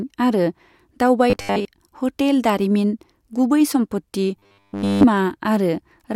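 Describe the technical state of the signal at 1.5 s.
At 1.5 s you're right in the middle of robotic sound from repeated short buffers, running from about 1.30 to 1.65 s. The speech collapses into a rigid 100 Hz metallic buzz, likely from fresh audio arriving too late and a 10 ms chunk being looped over most of that stretch.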